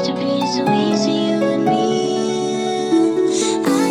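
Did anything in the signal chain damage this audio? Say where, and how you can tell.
No, nothing along the chain from capture through conversion, processing and playback has left an audible mark on this signal.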